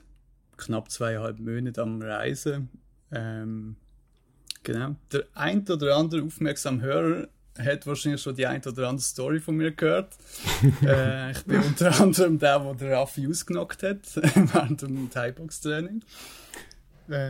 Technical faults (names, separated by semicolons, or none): none